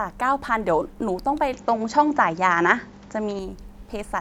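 At 1.53 s the speech suddenly goes dull, with nothing above 7.6 kHz, a level shift of roughly 5 dB and a faint new hiss underneath, then clears again at 3.39 s. That's likely an input switched to a poorer device, with no gap at the changeover.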